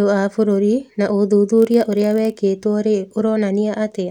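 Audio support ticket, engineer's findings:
Block size mismatch (padded), 1.55 to 2.38 s: a 43 Hz buzz on the speech, zero-filled gaps each block, consistent with a 1024-sample read stage. Pitch and pace essentially unchanged.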